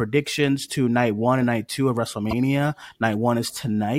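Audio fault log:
2.31–2.33 s, damaged data in a compressed stream: a short run of bytes in the encoded speech is corrupt, so the decoder misreads the frames there, loses sync and hunts for the next valid frame header before normal decoding resumes. For about 24 ms right after "and night two of", the speech gives way to a brief glitch, and then continues.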